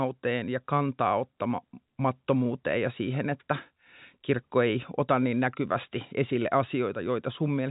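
No technical fault can be heard in the speech, which carries the narrow band of G.711 A-law telephone coding, with nothing above 3.8 kHz and at most a faint, level-following grain from the 8-bit logarithmic scale.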